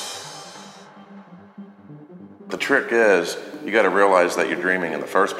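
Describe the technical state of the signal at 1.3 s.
At 1.3 s the signal is intact, with no audible dropout, distortion or other technical fault at that moment.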